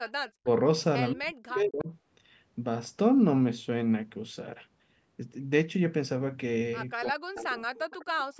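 At 0.08–0.12 s and 0.28–0.32 s, faint echo leak: a copy of the speech delayed about 185 ms, roughly 30 dB down, likely escaping an echo canceller. From 0.39–0.47 s and 1.13–1.89 s, speech suppressed in double talk, likely the canceller ducking both talkers, drops the speech by up to around 40 dB in chopped gaps. Similar suppression recurs at 6.99–7.67 s, overlapping another echo leak at 7.36–7.41 s. A longer leak follows at 7.78–8.05 s. Both late echoes are delayed about 200 ms and sit around 25 dB below the speech.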